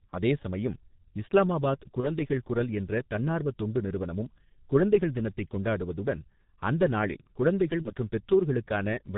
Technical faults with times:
0.00-9.17 G.723.1 codec
2.00-2.08 VoIP packet loss concealed by the speech codec
7.82-7.92 VoIP packet loss concealed by the speech codec

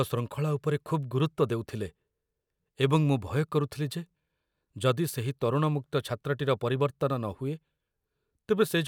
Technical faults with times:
none

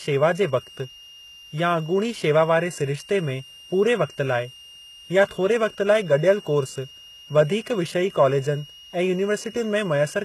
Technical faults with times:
0.00-10.25 switching supply whistle
0.00-10.25 HE-AAC compression

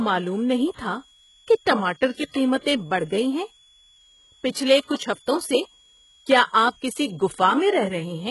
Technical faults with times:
0.00-8.31 switching supply whistle
0.00-8.31 HE-AAC compression

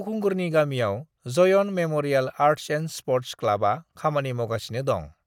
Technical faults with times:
none

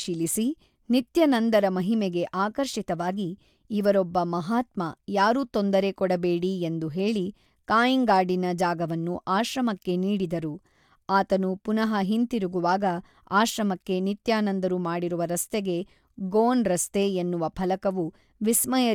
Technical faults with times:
none

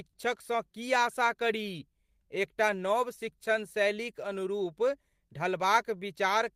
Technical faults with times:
0.00-6.55 clock drift between sender and receiver
0.09-0.15 short stall from a late packet
0.72-6.27 repeated timing corrections

